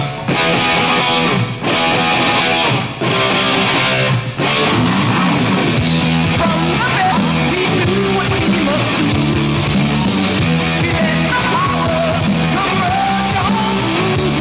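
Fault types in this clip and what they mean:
Skip ahead: Around 7.12 s the playback just jumps forward, with roughly 0.7 s of audio simply gone and no gap or fill. The two sides butt straight together, so the join sounds abrupt. That's what you get when a chunk is dropped while later audio is already queued.
Jitter buffer speed-up: From about 12.2 to 12.97 s the receiver was sitting on more audio than it wanted, so it trimmed tiny pitch-period-sized slices, roughly 100 ms in total. The sound runs at about 111% speed at unchanged pitch and comes across a bit rushed. The band-limit to 4 kHz from the call codec is audible throughout.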